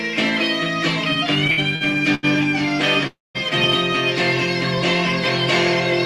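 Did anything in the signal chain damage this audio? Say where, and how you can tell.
Yes, at the network and jitter-buffer stage, in two places. Between 1.47 and 2.25 s there are repeated stalls (stutter): four short gaps, the longest 83 ms, together about 216 ms of filled-in sound, roughly 28% of that stretch. Nothing is lost, but the audio drags. On a spectrogram, each stall appears as a smeared horizontal band where the last spectrum is held before normal detail resumes. On the waveform, these are short repeated or slightly fading segments.

From 3.07 to 3.37 s the sound freezes. The last moment is carried on as a buzz or hiss that fades, and about 190 ms of the 278 ms inserted is near-silence. The audio then picks up where it stopped, now running about 278 ms later. This is likely a call audio freeze, with packets delayed until the jitter buffer emptied. On a spectrogram, this shows as a decaying stretched smear, then a blank column ending sharply under the 12 kHz top edge left by the Opus codec.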